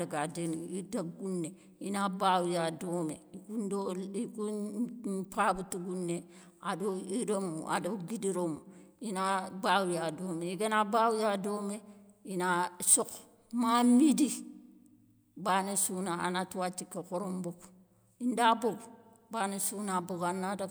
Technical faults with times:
none

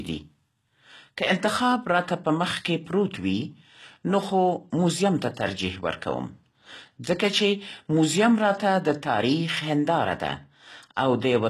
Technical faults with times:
0.00-11.50 HE-AAC compression

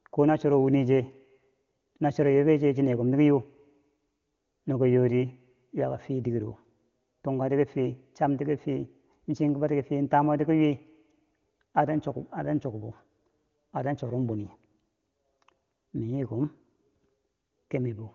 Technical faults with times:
none

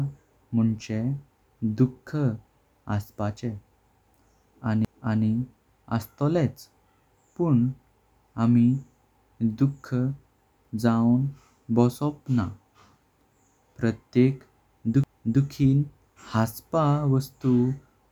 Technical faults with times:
4.85 CD skip
15.04 CD skip

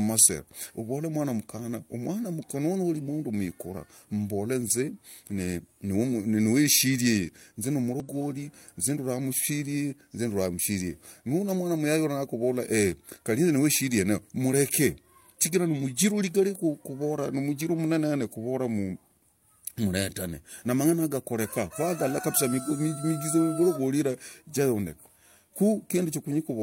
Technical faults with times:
8.00 compressed frames skipped

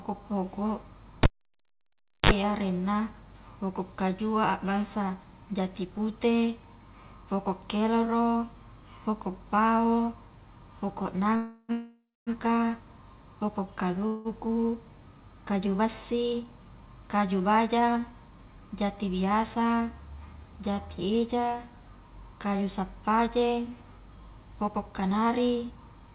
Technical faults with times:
1.23-2.31 cable pulled and plugged in
11.36-12.30 call audio freeze
14.07-14.28 call audio freeze
16.33-18.13 jitter buffer speed-up
24.12-26.14 jitter buffer speed-up

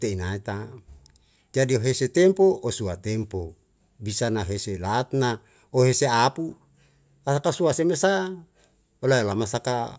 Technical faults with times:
none

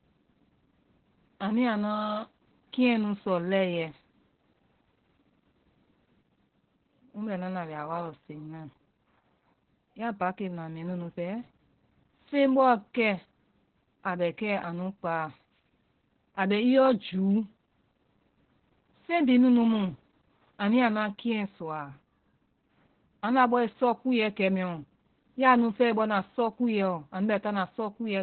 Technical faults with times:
0.00-28.23 Opus voice compression

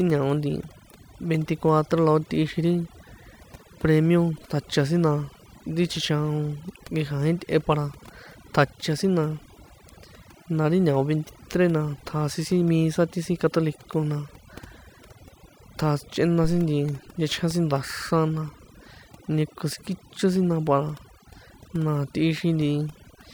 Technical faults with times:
0.00-23.33 overdone noise removal

